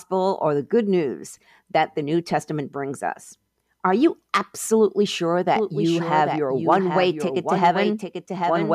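At 5.56 s, just after "you absolutely sure", a doubled audio track starts abruptly and runs to the end: a second copy of the speech sits roughly 0.7 s behind the original, somewhat quieter, likely captured again by a slower path. Unlike room echo or reverb, the trailing copy is full-band, carries no decay or room colour, and appears only once, so it sounds like two overlapping recordings rather than a reflection.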